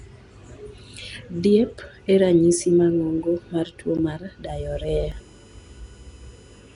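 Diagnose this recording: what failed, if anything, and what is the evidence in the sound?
Codec stage: the whole clip has a rough, hissy halo around the speech and a smeared, underwater quality, and nothing is present above 10.6 kHz. This points to Nellymoser compression, likely the Nellymoser Asao codec at a rate near 44 kbps. It codes fixed 256-sample blocks with a flat bit budget per sample. Weak bands that get no bits are filled with synthetic noise, which produces the hiss and smear, and the codec's bandwidth sets the ceiling on high frequencies.

Driver or buffer stage: three blocks of digital silence appear, at 1.12 s (2.9 ms, which fits a 128-sample block), at 3.97 s just after "mar tuwo" (11.6 ms, which fits a 512-sample buffer), and at 5.12 s (0.84 ms). Each one is a hard cut to silence with no fade. All three gaps are short enough to sound like ticks or dips rather than silence. 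Most likely the output buffer was not filled in time, and zeros were played in its place.

Analogue wiring and power: a USB whine of fixed pitch starts at 4.46 s, just after "mar tuwo mar", and runs to the end. It has a 1 kHz fundamental, with its strongest component at the 12 kHz harmonic, and sits roughly 30 dB below the signal. The 1 ms USB frame current leaks through the supply or ground into the audio path. Because energy at 12 kHz lies above the codec's cutoff, the whine entered after encoding.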